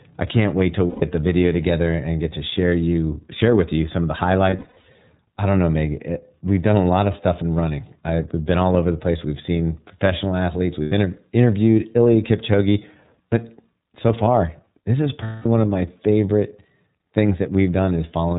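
iLBC codec damage runs through the whole speech clip and is plainly audible. The narrowband coder cuts everything above 4 kHz, so the sound is dull and boxy, with a rough, synthetic edge. The 13.33 kbps rate points to 30 ms frames. Each frame's excitation is coded on its own, without relying on the frame before.

Lost iLBC frames first occur from 0.87 to 1.04 s. A 150 ms gap is filled by the decoder, which fits five missing 30 ms frames. Concealment repeats the last pitch cycle blended with noise, so the gap sounds like a held, buzzy or breathy vowel. From 4.50 to 4.86 s, between "you some of the" and "I don't know", losses are scattered over about 360 ms, the longest run roughly 100 ms. Further gaps follow at 10.83 to 10.92 s after "seen professional athletes", at 13.29 to 13.33 s, and at 15.23 to 15.46 s between "so far this is" and "one of my favorite". Because frames stand alone, the voice recovers almost immediately after each gap.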